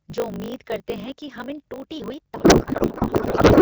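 Block size mismatch (truncated) runs throughout this speech clip. Each block's tail is discarded, producing a 50 Hz buzz and speech running 1.16 times fast at near-normal pitch, which fits a 1024-sample write block. Codec payload misread starts at 2.36 s, right after "हम इन टूटी हुई", and lasts to the end. The AMR-WB decoder, otherwise coding lightly at what sounds like 12.65 kbit/s, turns the speech into garbled noise and warble, which points to octet-aligned frames being read as bandwidth-efficient.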